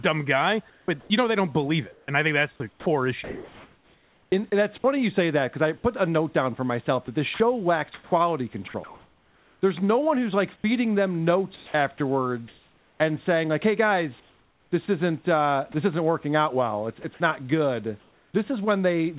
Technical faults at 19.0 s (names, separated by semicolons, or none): none